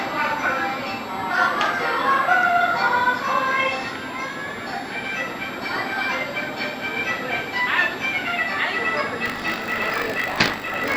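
A switching supply whistle runs throughout, a faint high tone drifting between 3.67 and 3.88 kHz, well below the signal, visible on a spectrogram as a thin wandering horizontal line. From 9.24 s to the end, buffer tearing adds a 50 Hz robotic buzz. A small slice of each period repeats audio from a few tens of milliseconds earlier, showing as regular hard seams in the waveform.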